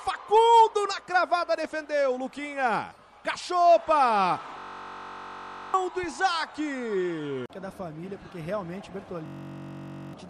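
A steady, low buzz near 47 Hz replaces the sound from 4.59 to 5.74 s and again from 9.26 to 10.13 s. This is a system hang loop: with the host frozen, the hardware kept replaying one 21.33 ms buffer, which fits a 1024-sample buffer, and about a second of audio went missing each time.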